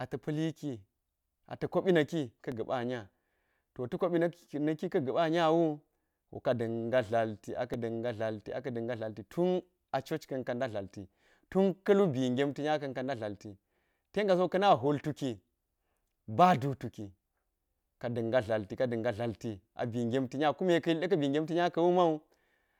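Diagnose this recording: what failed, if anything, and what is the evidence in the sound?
The playback buffer stage is at fault: two underruns with held sample, at 2.52 s and 7.74 s in the speech. Each time the output buffer ran dry for about 1.3 ms, which fits a 64-sample block, and the converter just sat on its last value, so the waveform flattens. About a millisecond and a half of live audio was skipped.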